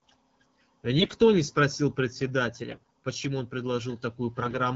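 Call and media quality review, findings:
AMR bit errors. Three short bursts of hoarse, scratchy, gargly speech at 0.98–1.14 s, 2.71–2.87 s and 4.42–4.57 s. Pitch and level roughly hold. Component: radio link into the AMR decoder. Mechanism: flipped low-protection bits, near one in ten (about 7% in the last burst), pass the checksum. Pulses land misplaced. Fine gain, pitch and spectrum values go wrong. Between bursts the wideband band is clear, which fits AMR-WB near 12.65 kbit/s.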